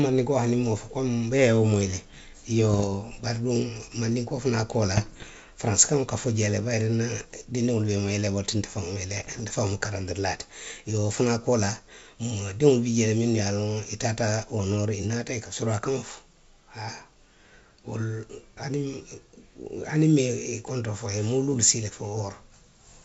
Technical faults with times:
2.71-2.89 bit errors on an ADPCM link
4.96-5.30 bit errors on an ADPCM link
9.10-9.40 bit errors on an ADPCM link

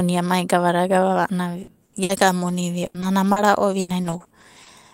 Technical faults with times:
1.63-4.68 repeated packet loss (robotic sound)

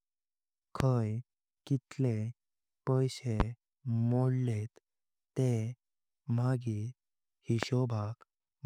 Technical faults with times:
0.80-0.83 loud pop
3.40-3.43 loud pop
7.63-7.66 loud pop

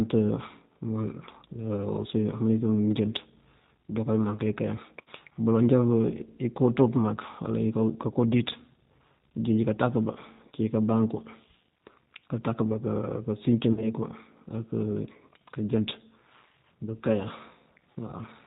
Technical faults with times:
0.00-18.46 G.729 codec
5.02-5.08 VoIP packet loss concealed by the speech codec
13.73-13.88 VoIP packet loss concealed by the speech codec
17.98 VoIP packet loss concealed by the speech codec

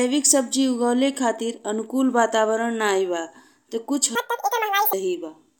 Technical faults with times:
4.15-4.93 audio read two samples at a time (double speed)

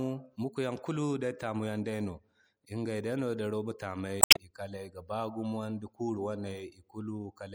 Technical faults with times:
0.00-7.55 MP3 compression
4.19-4.37 damaged data in a compressed stream

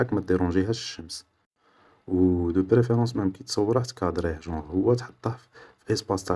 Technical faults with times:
none

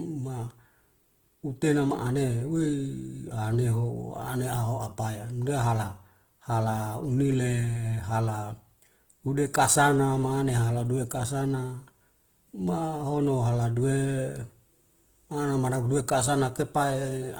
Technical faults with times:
0.00-17.40 Opus compression

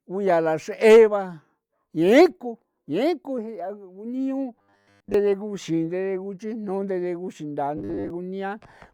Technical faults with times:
4.55-5.14 robotic sound from repeated short buffers
7.77-8.10 robotic sound from repeated short buffers

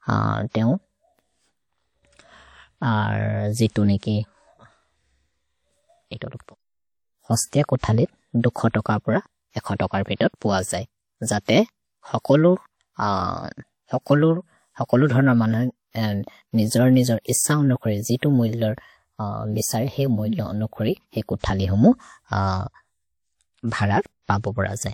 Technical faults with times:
10.15-10.21 pre-echo

